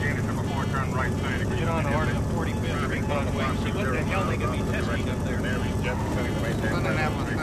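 Repeated frames stutter the audio at 0.89–0.91 s and 6.93–6.95 s. Each time, one 20 ms block replays once, adding 20 ms.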